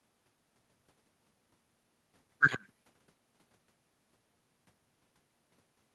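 A speech recording carried over a WebRTC call path, with the audio band ending around 12 kHz as the codec allows, and no technical faults.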